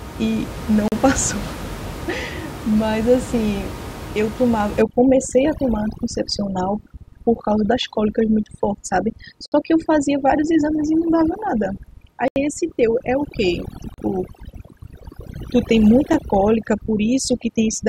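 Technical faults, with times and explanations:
0.88–0.92 s, 9.46–9.52 s, 12.28–12.36 s, 13.94–13.98 s and 16.13 s: blocks of digital silence. The audio drops straight to silence and comes straight back, with no fade either way. The 40, 60 and 80 ms gaps come across as short holes. The one at 16.13 s lasts only about 6 ms and is more of a single tick. It sounds like the output buffer wasn't filled in time, leaving blank blocks.
4.82 s to the end: overdone noise removal. The noise reduction is pushed too hard for a recording whose room noise sits only about 11 dB under the speech. It kills individual frequency bands whenever they get near its noise estimate. What's left of the background flickers with little twinkling specks instead of steady noise. The quieter parts of the voice get stripped out along with it.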